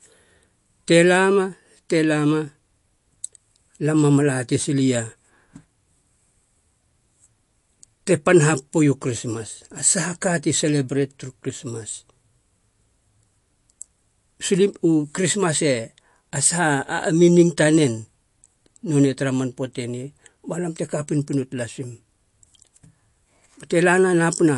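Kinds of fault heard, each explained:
MP3 compression: the speech has a watery, swirly edge throughout, with nothing above about 11.2 kHz, so the top end sounds clipped off. That's likely a low-bitrate MP3, something like 48 kbps, where the encoder drops the treble and lets weak frequency detail flicker in and out between frames.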